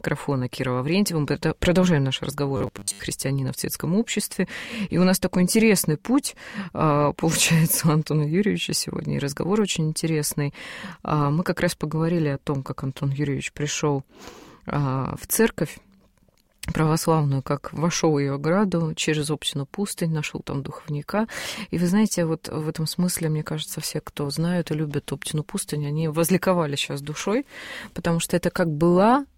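Audio arriving too seldom likely left the software repeating a short buffer, around 10 ms long, for most of the stretch from 2.57 to 3.00 s, causing robotic sound from repeated short buffers: a rigid, metallic buzz at 100 Hz that follows the original only roughly.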